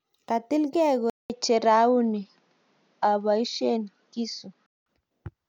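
Speech, and at 1.10 s it drops out for 0.2 s, then turns dull with nothing above 7.1 kHz until 4.86 s, likely an input switched to a poorer device.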